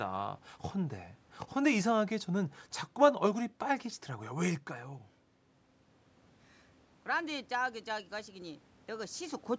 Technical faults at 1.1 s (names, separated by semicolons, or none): none